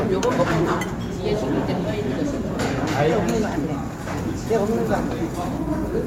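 Nothing stood out on listening to these sounds.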